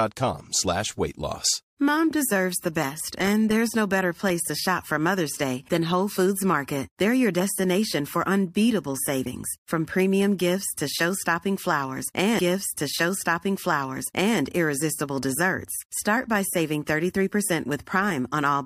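At 12.38 s the speech jumps back and replays about two seconds it has already played, running until 14.38 s, just before "irresistible desserts" picks up again. That's a stream segment repeated: the player fetched or queued the same chunk twice, so roughly 2.0 s of extra material gets spliced in. You can catch a small blip right at the jump back, and then the déjà vu of hearing the same stretch again.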